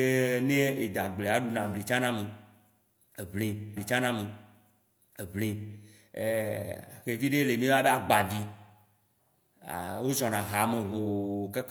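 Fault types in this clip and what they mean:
Stream segment repeated: the player queued the same chunk of the stream twice, so about 2.0 s of speech plays again. The repeat runs from 3.73 s to 5.74 s, with a small blip at the jump back, and the clip grows by that amount.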